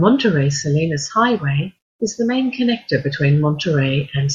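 No technical faults can be heard anywhere in this recording.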